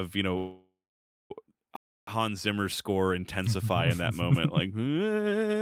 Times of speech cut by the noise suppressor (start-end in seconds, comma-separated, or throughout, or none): none